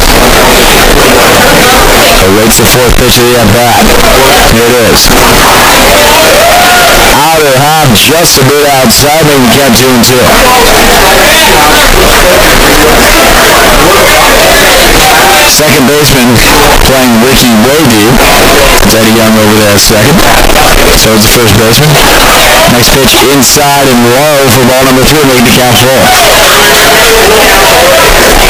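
From start to finish the audio is a dense, harsh distortion at near full level, with quiet stretches as loud as everything else. This is likely signed and unsigned mixed up, consistent with 16-bit samples: the top bit flips, so every zero crossing jumps across the full range.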